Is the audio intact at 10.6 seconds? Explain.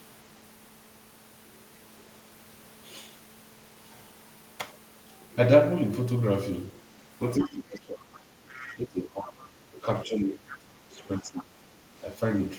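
No. At 10.6 seconds the speech is partly suppressed in double talk, a dip running from 10.04 to 11.77 s that pulls the voice down by roughly 20 dB at its deepest. The likely cause is an echo canceller turning down everything while both ends talked at once. Unlike a plain level drop, the voice is turned down along with the echo.

Just before, from 10.52 to 10.56 s, a brief scrap of the other side's voice leaks through, well below the speech. It is likely loudspeaker echo the canceller failed to remove. Here a second voice is added rather than the main one lost.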